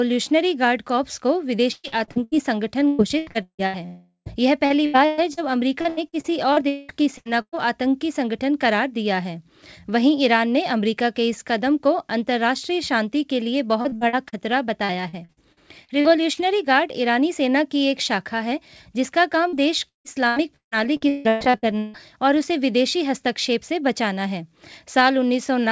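From 1.72 to 2.35 s the sound turns choppy and robotic. This is repeated packet loss. Packets went missing in quick succession, and each hole was patched by stretching the previous sound. Here five gaps take about half the span. The same happens from 2.88 to 3.77 s, with a longest gap of 159 ms.

From 3.86 to 4.29 s the sound stretches into a fading buzz, then drops to about 110 ms of silence before returning. A long network dropout is the likely cause. A whole block of audio never arrived, and the receiver filled the hole with the last sound until nothing was left to extend.

The repeated packet loss returns from 4.66 to 5.40 s, from 5.81 to 7.66 s with a 200 ms longest gap, and from 13.81 to 16.40 s. The last stretch has fifteen short gaps of 43 ms or less. From 19.49 to 21.97 s it is heavy again, with over a second patched. Throughout the clip, nothing sounds above 8 kHz, which points to a G.722 call path.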